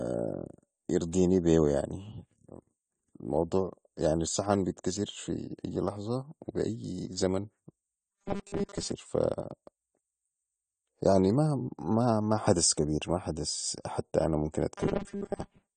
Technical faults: AAC compression; robotic sound from repeated short buffers

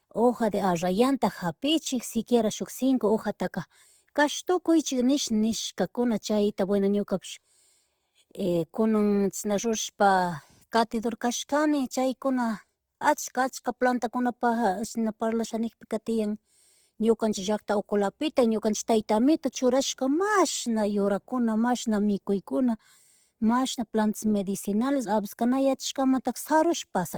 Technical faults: Opus compression

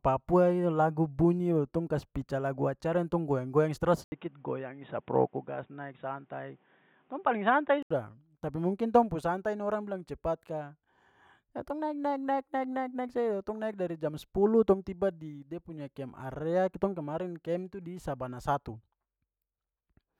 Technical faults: input switched to a poorer device

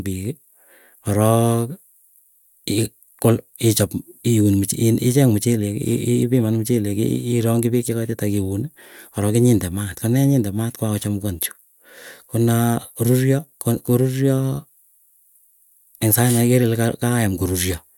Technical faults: none

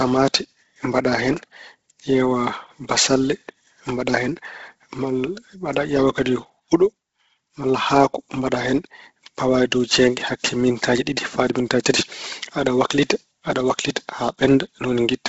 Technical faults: Bluetooth LC3 compression

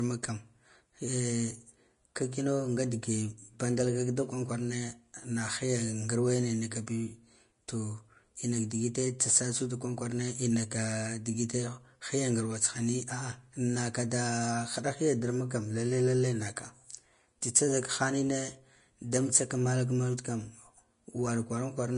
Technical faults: Vorbis compression

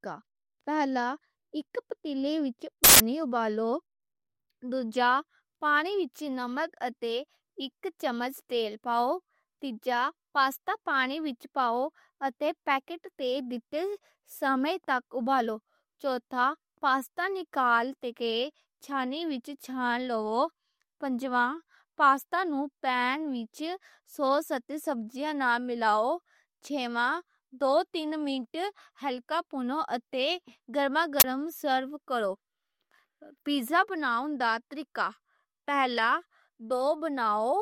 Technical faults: uninitialised buffer

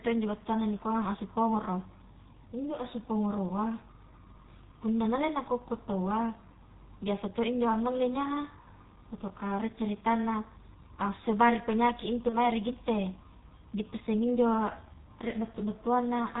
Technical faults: G.723.1 codec; VoIP packet loss concealed by the speech codec

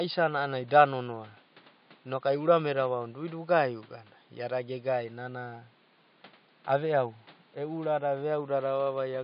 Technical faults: none

